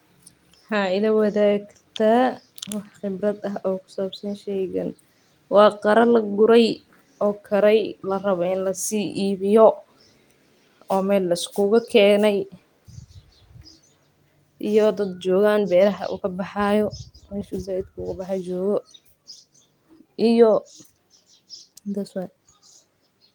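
Nothing in the speech stood out as a technical problem on listening.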